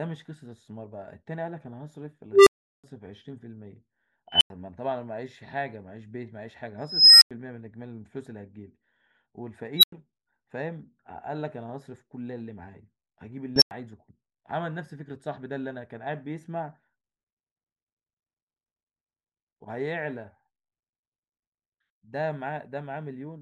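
Unstable filter at 2.32–2.84 s, 4.28–4.50 s, 6.78–7.31 s, 9.77–9.92 s and 13.56–13.71 s. A recursive filter with bad coefficients runs away, so a tone swells until it clips and overflows, and the audio drops out until the filter resets. The first is a low squeal near 400 Hz that builds over 0.14 s, followed by 0.37 s of silence. The rest are high beeps near 3 kHz, 5 kHz, 4 kHz and 5 kHz, each followed by about 0.09 s of silence. Their build-ups are 0.13 s, a slow 0.43 s, and two quick 0.06 s rises.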